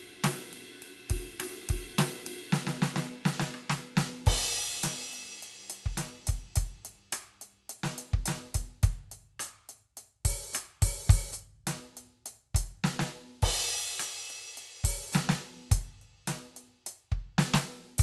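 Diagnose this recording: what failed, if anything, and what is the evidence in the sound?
Nothing failed in this recording.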